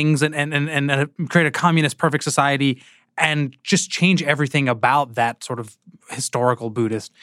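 No technical faults can be heard anywhere in the recording. Nothing in the speech points to a problem in how it was captured, processed or played back.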